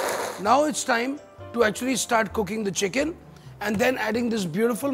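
Nothing goes wrong anywhere in this clip; it just runs along without a single glitch or hiccup to point to.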